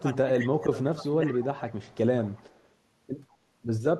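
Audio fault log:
0.00–1.65 s: speech suppressed in double talk. The voice dips by about 15 dB for roughly a second and a half. This is likely an echo canceller mistaking both talkers for echo and turning the whole signal down.
1.33–1.40 s, 1.69–1.97 s, 2.22–2.68 s: echo leak. A faint copy of the voice trails it by 182 ms, about 20 dB down at first, then about 35 and 30 dB down. This likely comes from loudspeaker sound escaping the echo canceller on the loudspeaker side.
3.96–4.00 s: speech suppressed in double talk. A brief dip of about 20 dB clips the very end of the sound. The likely cause is again an echo canceller pulling the level down while both sides are active.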